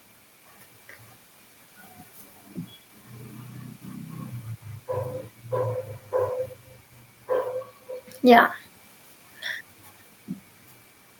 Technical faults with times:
none

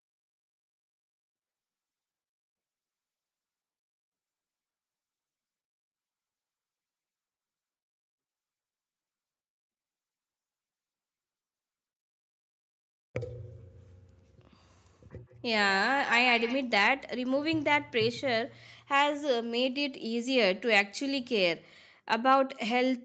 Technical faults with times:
14.80-16.69 feedback echo between two devices

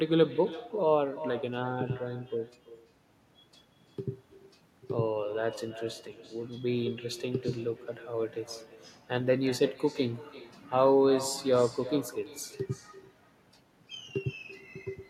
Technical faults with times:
0.00-15.10 echo with no canceller

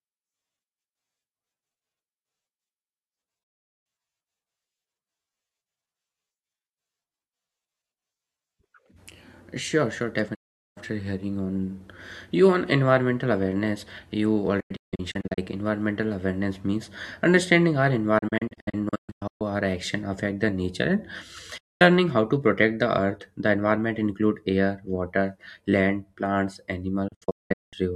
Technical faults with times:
3.43-3.86 digital broadcast dropout
10.34-10.77 digital broadcast dropout
14.60-15.38 digital broadcast dropout
18.18-19.41 digital broadcast dropout
21.57-21.81 digital broadcast dropout
27.08-27.77 digital broadcast dropout

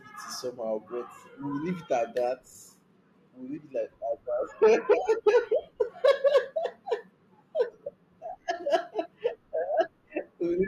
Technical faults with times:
3.56 compressed frames skipped
9.04 compressed frames skipped

